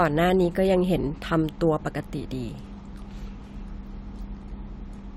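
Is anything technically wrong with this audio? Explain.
No, nothing technically wrong can be heard in this recording.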